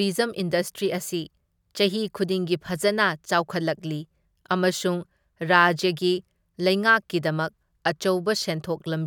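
A speech recording with nothing technically wrong to point to anywhere along its run.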